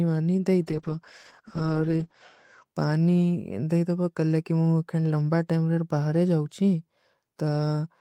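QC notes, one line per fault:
0.63–2.71 s, call bitrate drop: the speech turns muffled and watery, losing everything above 8 kHz for about 1.7 s, which fits the encoder squeezed from around 48 kbps to about 11 kbps. Unlike a plain low-pass, grainy coarseness accompanies the dullness.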